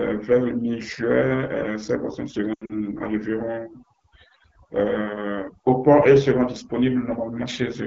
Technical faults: overdone noise removal; AMR wideband (HD Voice) codec; lost AMR speech frames

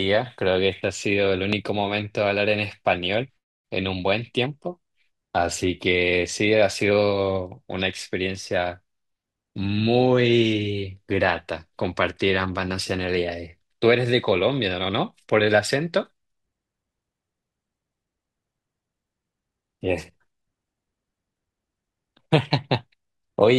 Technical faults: loud pop

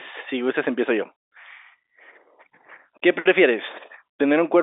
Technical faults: none

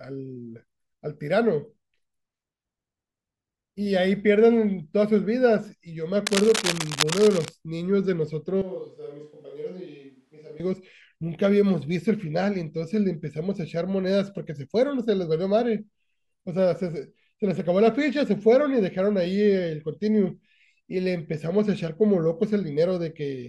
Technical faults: cable scratch noise; switch to a distant microphone

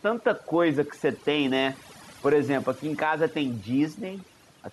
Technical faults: overdone noise removal; gain pumping

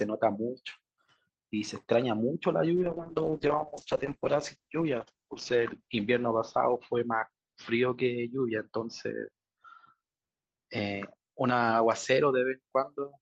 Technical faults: call bitrate drop

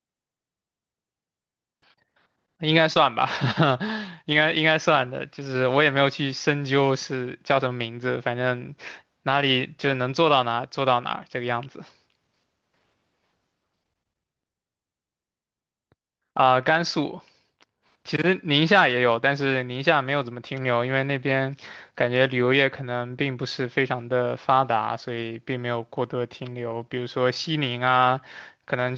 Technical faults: short concealed packet loss; lost packet rebuilt from error correction

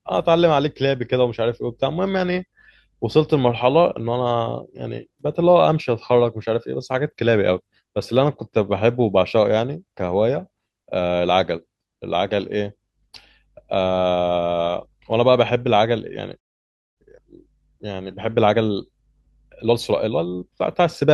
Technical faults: call audio freeze; jitter buffer speed-up

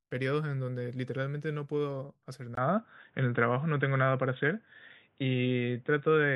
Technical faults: input switched to a poorer device

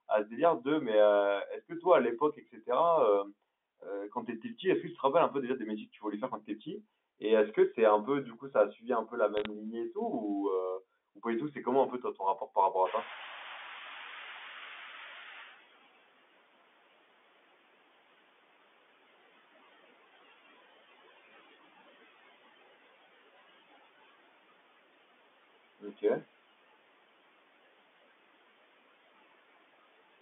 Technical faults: noise suppressor artifacts; speech cut by the noise suppressor; bit errors on a digital phone line; noise suppressor catching up

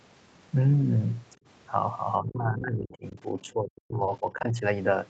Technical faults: speech suppressed in double talk; other side's voice leaking through

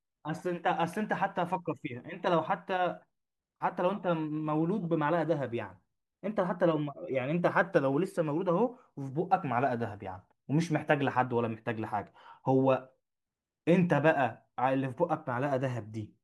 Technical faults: none

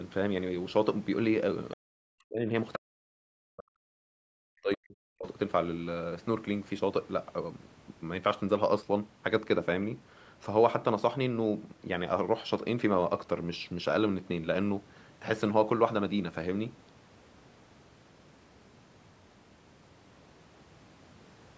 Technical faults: other side's voice leaking through; speech suppressed in double talk

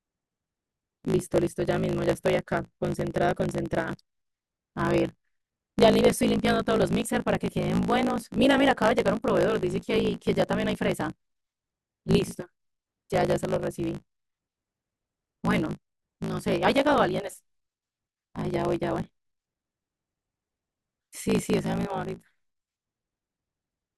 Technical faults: block size mismatch (truncated)

